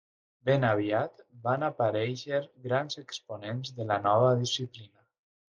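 No technical faults are audible.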